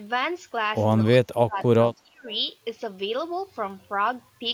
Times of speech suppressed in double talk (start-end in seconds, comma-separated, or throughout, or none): 1.03-1.59, 1.97-2.28